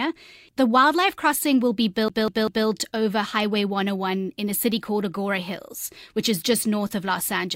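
A scratch on the disc is making the laser jump back one track at the same point on each rotation, so this speech recording shows the classic fault of a CD stuck on one turn. From 2.08 s to 2.67 s, a fragment of about 195 ms plays three times in a row, each repeat separated by a brief mute at the jump, producing the quick, evenly spaced stutter of a skipping CD before playback moves on.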